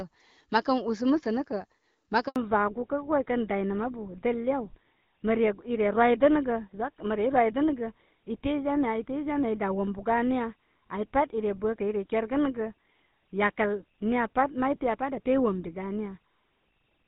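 A recording of speech over a phone call cuts to silence for 80 ms, from 2.28 to 2.36 s, as the sound dies away almost instantly and returns only when the new link starts. This is a handover gap: the call switched networks and no speech frames arrived during the changeover. From 2.36 s to the end, the speech turns duller and rougher, with nothing above 4 kHz. Before 2.28 s it has the clearer, lightly coded wideband sound of HD Voice. That is a fallback to narrowband, with the call leaving the wideband codec for an older one, which fits GSM full rate.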